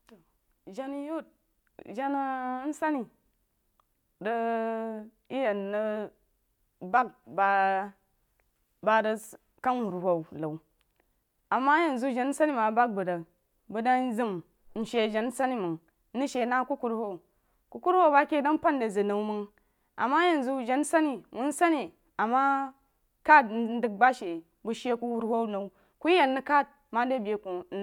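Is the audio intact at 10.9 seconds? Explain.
Yes, at 10.9 seconds the speech plays through intact, with no audible fault at that moment.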